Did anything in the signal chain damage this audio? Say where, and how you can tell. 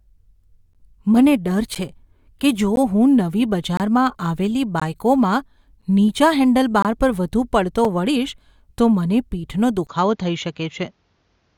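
Yes. Short hard-edged silences, 4 to 26 ms, fall once per second at 0.73, 1.75 (before "છે કે"), 2.76, 3.77, 4.80, 5.82, 6.82 and 7.85 s (before "વળીશ તો"). This is a gap between stream segments at the network or streaming stage, where 1-second segments' time stamps don't abut and the player fills the holes with silence.

At 9.87 s, after a 20 ms dropout, the sound turns duller to the end, with nothing above 7.1 kHz, a faint new noise floor and unchanged level. The likely cause is the input being switched to a poorer device at the driver stage.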